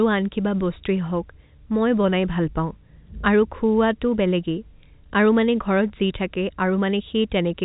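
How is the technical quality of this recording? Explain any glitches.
No glitches can be heard in this speech recording.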